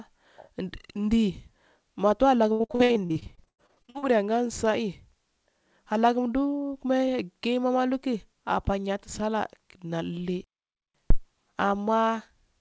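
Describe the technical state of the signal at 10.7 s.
At 10.7 s the speech has stopped dead in mid-flow: the output falls silent from 10.44 s to 10.94 s, a gap of about half a second, before the sound picks up again. This is a playback stall, likely caused by the player running short of buffered data or its audio thread being held up, so nothing reached the output until it recovered. The surrounding call-band audio, which ends around 8 kHz, resumes after the gap.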